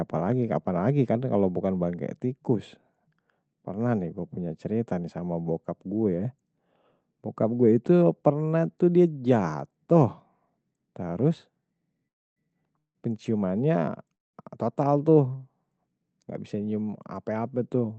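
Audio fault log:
12.07–12.39 s, 12.78–12.98 s and 14.15–14.36 s, call audio freeze: gaps of about 0.29, 0.17 and 0.19 s, mostly silent, before "penciumannya total tuh" and "total tuh", likely from packets stalling and the jitter buffer emptying. Unlike a dropout, no speech is lost; it resumes exactly where it paused, just later.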